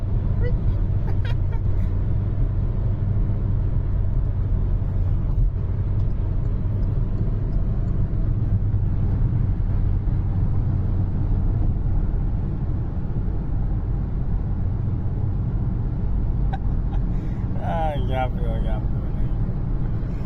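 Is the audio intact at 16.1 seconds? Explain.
Yes, at 16.1 seconds the audio is intact, with no dropout, click, distortion or other fault at that moment.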